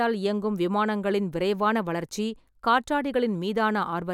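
No technical fault stood out on listening to this speech recording.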